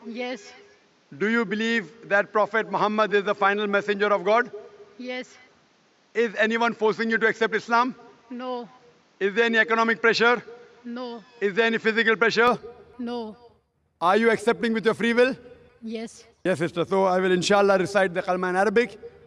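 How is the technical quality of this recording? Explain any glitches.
The first 12.48 seconds are duller than the rest, with nothing above 7.6 kHz and a faint extra noise sitting around 40 dB below the signal. At 12.48 s the top end opens up again, with no gap and no real jump in level. That pattern points to an input switched to a poorer device: the recording likely began on a narrower-band microphone or headset profile, with its own noise floor, before changing to the fuller input.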